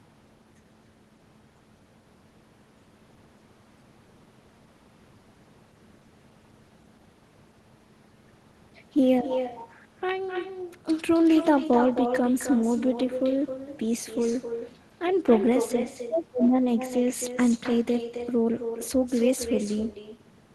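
Throughout, the far end's loudspeaker feeds its microphone with no echo canceller, so every phrase returns around a third of a second later, about 9 dB quieter and thin, over a call path whose sound stops near 12 kHz.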